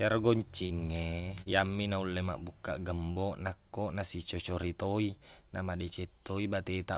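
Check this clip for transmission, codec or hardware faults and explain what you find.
There are three brief transmission dropouts in the speech. Short concealed packet loss at 0.66, 1.42 and 3.12 s: each is a brief smear or wobble about 40 ms long. Audio arrived too late to decode, so the receiver stretched the preceding sound to bridge the gap before fading back into the real signal. The call path's narrowband sound, with nothing above 4 kHz, fits a G.711 mu-law link.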